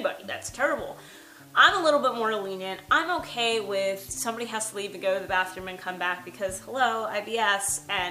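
Low bit depth without dither runs throughout: the audio carries a grainy distortion that tracks the sound, roughly 30 dB below the signal, with quiet passages turning gritty. The likely cause is rounding to few levels without dither, which fits a 9-bit signal, so the error follows the waveform.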